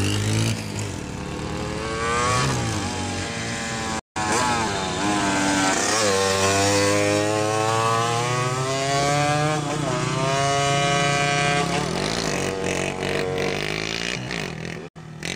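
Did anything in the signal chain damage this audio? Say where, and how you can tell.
Yes. The wireless playback link likely failed to deliver packets to the headphones in time, a Bluetooth dropout. The sound cuts to silence from 3.99 to 4.17 s and from 14.88 to 14.97 s, then resumes further along, as if it had kept playing.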